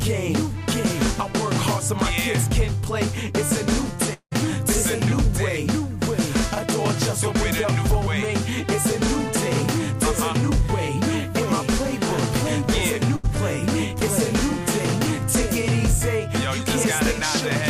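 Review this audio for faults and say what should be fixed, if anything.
From 4.13 to 4.33 s the last sound is stretched into a fading buzz or hiss, followed by near-silence for about 80 ms. It resumes past roughly 180 ms of lost material, which points to a long network dropout as the likely cause. More jitter-buffer headroom and redundant transmission would cover gaps of this length.

At 13.16 to 13.25 s a burst of packet loss removes 80 ms. The receiver bridges 74 ms of it by repeating and attenuating the preceding sound, then jumps ahead. Forward error correction or packet redundancy on the link would recover short consecutive losses like this.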